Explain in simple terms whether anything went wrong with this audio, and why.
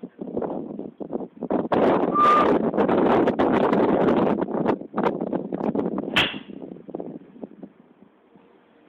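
Nothing went wrong with this audio. No moment in it stands out as broken or disturbed, so there is no fault to explain.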